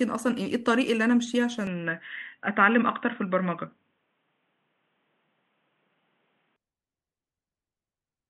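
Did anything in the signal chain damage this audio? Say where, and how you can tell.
Yes: input switched to a poorer device, 1.67 to 6.56 s. The speech dulls abruptly, with nothing above 3.8 kHz and no gap, likely a driver-stage device change.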